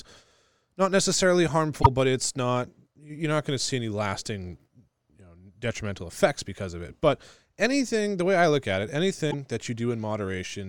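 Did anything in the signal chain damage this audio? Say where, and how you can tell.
Yes, at the codec or storage stage: damaged data in a compressed stream. Corrupted bytes made the decoder misread frames and search for the next frame header, producing brief disruptions from 1.79 to 1.87 s, after "not necessarily", and from 9.30 to 9.34 s, after "I look at it".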